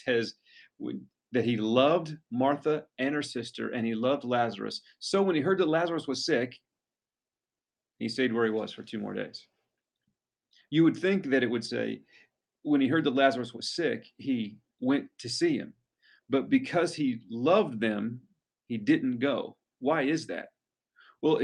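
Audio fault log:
No technical faults are audible anywhere in the signal, which holds continuity throughout.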